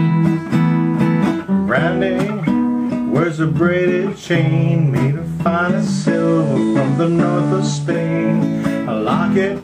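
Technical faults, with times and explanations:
5.62–8.21 s, digital radio blending to analogue: the receiver lost the digital stream and cross-faded over about 0.41 s to the station's FM broadcast, then faded back at 8.21 s. During the FM stretch, a hiss sits roughly 30 dB below the signal. The level also drops by about 1 dB, because the two chains are not quite matched in loudness.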